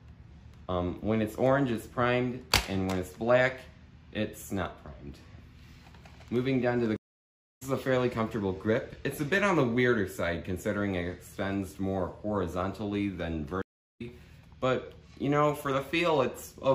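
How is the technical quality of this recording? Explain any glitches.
The recording is marred by two stream reconnects. At 6.96 to 7.62 s the sound stops for about 0.6 s and resumes roughly 0.7 s further on; at 13.62 to 14.02 s a 0.33 s gap skips ahead about 0.3 s. Each time the connection dropped and a fresh decoder restarted mid-stream, fading in. Unlike a simple dropout, material is missing after the silence.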